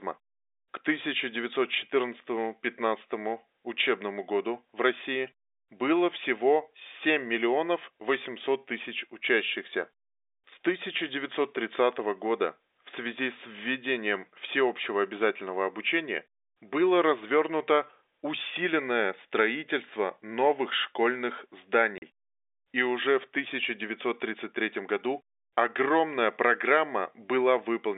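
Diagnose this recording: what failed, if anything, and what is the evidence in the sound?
Network stage: the speech drops to dead silence at 21.98 s for 40 ms, with hard edges. That fits two 20 ms packets lost and the receiver filling the hole with zeros. The G.711 telephone coding around it keeps its usual 300 Hz to 3.7 kHz band.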